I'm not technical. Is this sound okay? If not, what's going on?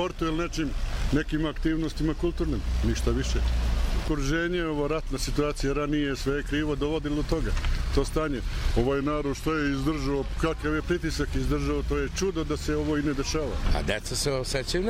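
No. A wrong sample rate fault runs from 8.73 to 10.62 s. That stretch plays back slower than it was captured, at about 0.92 times normal speed, so the sound drags and drops about one and a half semitones in pitch, which fits 48 kHz audio being played at 44.1 kHz.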